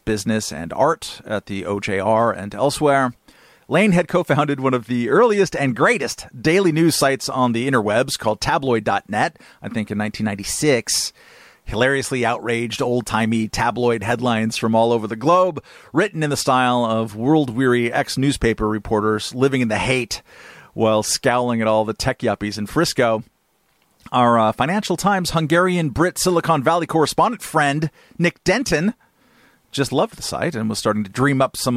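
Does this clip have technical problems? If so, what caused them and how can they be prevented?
No, nothing in this recording points to a technical fault, so there is no cause to trace and nothing to prevent.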